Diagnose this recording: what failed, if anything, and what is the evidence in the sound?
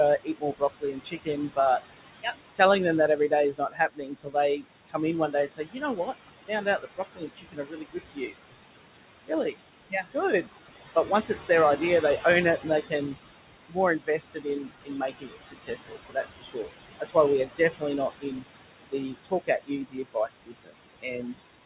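The failure is in call processing: noise suppressor artifacts run through the whole recording. The suppressor pulls the background down by about 19 dB between phrases and lets it back in underneath them, so the floor pumps and the leftover noise warbles. On a spectrogram the noise floor goes dark in the gaps and reappears as scattered, flickering blobs under the speech. The room noise sits about 10 dB below the speech, and all content ends at 4 kHz, which fits the G.711 A-law call path at 64 kbps.

The same stage also produces speech cut by the noise suppressor. With the noise only about 10 dB down, the suppressor mistakes weak speech for noise and cuts it by about 19 to 21 dB. This happens from 0.24 to 1.58 s, from 2.22 to 2.6 s just before "them that", from 3.17 to 8.34 s just after it, and from 9.26 to 21.43 s. Several seconds of speech in total are swallowed. On the waveform, word tails collapse abruptly, and on the spectrogram the faint consonant energy is missing.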